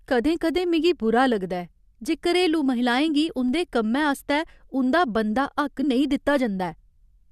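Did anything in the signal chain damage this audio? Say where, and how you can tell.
Yes. A corrupt frame was decoded at the codec stage, from 3.08 to 3.10 s. A short error peaks at about -25 dBFS, spanning roughly two frames. Flipped bits made the decoder misplace energy across frequencies, yet it played the damaged frames anyway.

A DC step occurs at 3.49 s, just before "कम्मै आस्तै उं'दा बनदा". It points to the converter or analogue input. The waveform's zero line jumps, giving a low thump while the speech carries on. The offset then decays through a 2 Hz high-pass.

Compressed frames were skipped between 5.82 and 5.84 s, right after "कम्मै आस्तै उं'दा बनदा". This is a storage or decoder fault. About 20 ms of audio is missing.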